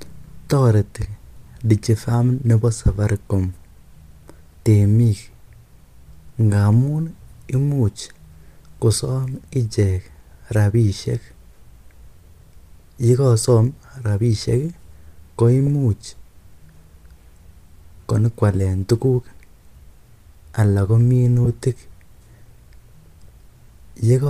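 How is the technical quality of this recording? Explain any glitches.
The speech has two brief dropouts from lost LE Audio frames. The signal carries a faint grainy edge, likely from LC3 coding at 64 kbps.

Lost LE Audio frames occur at 15.67 s and at 21.45 to 21.47 s, right after "anan ko". Each gap lasts about 10 ms, which fits a single lost 10 ms frame. The decoder filled each gap by repeating the previous spectrum with randomised phase, so each is heard as a short, noisy smear in the speech rather than a clean silence.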